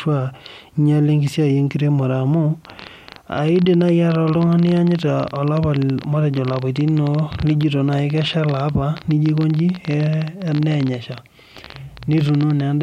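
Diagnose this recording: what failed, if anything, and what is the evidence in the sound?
A train of clicks runs from 2.65 s almost to the end at 12.61 s, about 15 per second at an uneven pace, somewhere around 150 in all. The pulses share much the same shape and peak a little above the speech level, so they tick through pauses as well as over talking. Repeated pulses this uniform point to an outside source rather than a codec artefact, likely interference coupling into the analogue wiring or a faulty connection or power supply.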